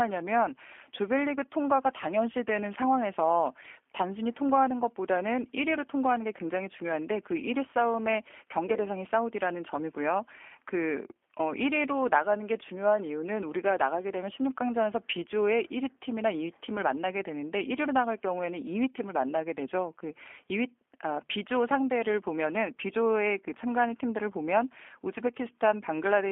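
Throughout, G.729 codec damage confines the speech on a spectrogram to 250 Hz–3.4 kHz, and the pulse-rebuilt sound is rough and synthetic, fitting 8 kbit/s.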